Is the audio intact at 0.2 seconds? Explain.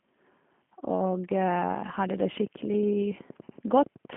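No, at 0.2 s you're already hearing G.729 codec damage, and it runs through the whole clip. The speech is being rebuilt from a vocal tract filter, a pitch predictor and a handful of pulses per 10 ms frame, which fits an 8 kbit/s G.729A stream. There's nothing above 3.6 kHz, the band sits inside a 150 Hz to 3.4 kHz phone line, and the roughness and synthetic edge are plainly audible.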